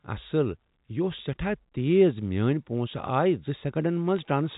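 Bit errors on a digital phone line mark this speech clip from 4.16 to 4.25 s: a few flipped bits per thousand corrupt single samples on its telephone-band G.711 line, producing brief sharp ticks and crackle.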